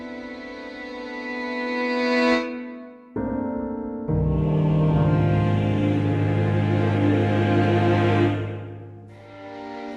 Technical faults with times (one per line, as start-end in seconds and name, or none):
3.28-3.36 repeated frames